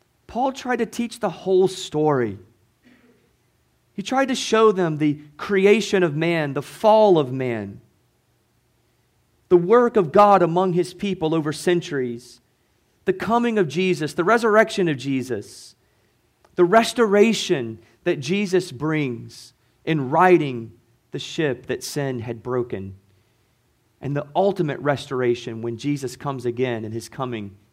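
Hard clipping at 10.18 to 10.35 s, just before "among his people over", then at 14.58 to 14.61 s and 16.76 s: speech peaks overran the signal path's ceiling by about 3 dB, 1 dB and 3 dB, and were flattened, adding high harmonics that crackle on those peaks.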